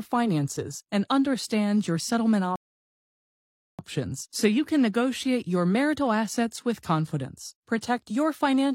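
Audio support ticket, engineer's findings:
Silence 2.56–3.79 s, speech then resumes exactly where it stopped, nothing lost. Rebuffering stall: player buffer ran dry, playback halted until data arrived, adding 1.23 s.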